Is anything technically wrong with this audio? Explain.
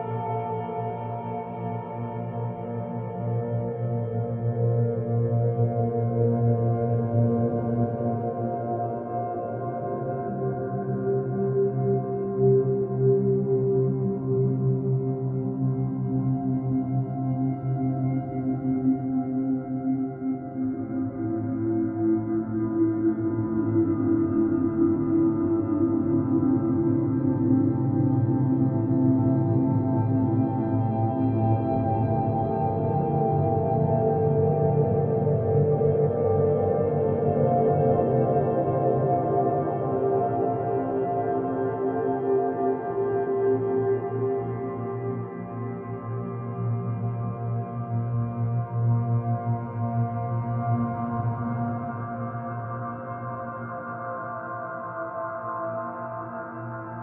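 No, nothing is technically wrong with this audio.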